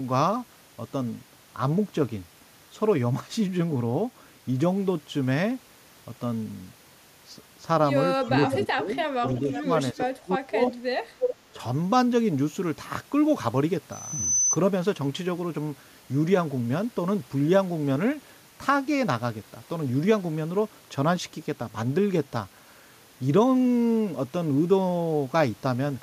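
An echo canceller that likely could not tell its own talker from loudspeaker echo while both sides spoke at once turns the speech down in short bursts, giving speech suppressed in double talk: brief dips at 8.25–8.3 s (about 15 dB) and 11.53–11.58 s (about 10 dB), and longer stretches from 8.66 to 9.7 s (about 10 dB at most) and 9.93 to 10.62 s, where the drop reaches about 30 dB and the speech nearly cuts out.

Interleaved with these, the canceller on the loudspeaker side likely lets some of its loudspeaker pickup through, producing echo leak: a copy of the speech returning 360 ms late at 8.46–8.63 s, 9.39–9.62 s, 10.66–10.74 s and 11.19–11.35 s. The scraps range from about 20 dB below the speech to roughly as loud as it, the last one being the most obvious doubled fragment.

At 13.92 s a microphone is picking up the loudspeaker it feeds, and at 6 kHz the loop gain passes one, so that frequency reinforces itself: a loudspeaker feedback squeal. 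A thin, high 6 kHz tone swells over about 0.4 s until it sits at roughly the level of the speech, then stops at 14.58 s.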